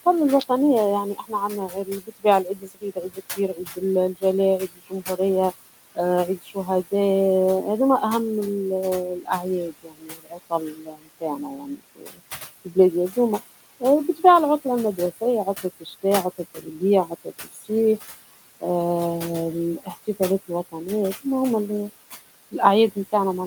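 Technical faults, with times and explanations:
Throughout, noise suppressor artifacts: the suppressor pulls the steady room noise, which sits about 15 dB below the speech, down by about 16 dB in each band it judges to be noise. The residue rises under the speech and sinks between phrases.
1.04–5.19 s, 5.91–6.92 s, 9.2–17.7 s and 19.8–21.9 s, speech cut by the noise suppressor: the suppressor mistakes parts of the speech for noise and drops them by up to about 19 dB (about 14 dB in the last stretch). Soft consonants and quiet word endings come out swallowed. This totals roughly a second and a half in the first stretch, a fraction of a second in the second, about three seconds in the third and only brief moments in the last.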